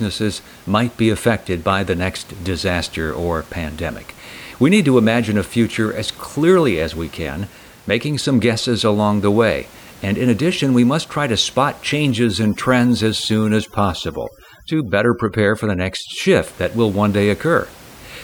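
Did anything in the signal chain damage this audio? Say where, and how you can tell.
Yes. Overdone noise removal is audible from 12.10 to 16.47 s, starting after "must try to spot" and ending before "that will one", and it belongs to the call-processing stage. Through that stretch the room noise, about 25 dB below the speech, drops and breaks up into twinkling specks. A suppressor set too aggressively is pulling individual frequency bands down wherever they sit close to its noise estimate, taking quiet parts of the speech with them.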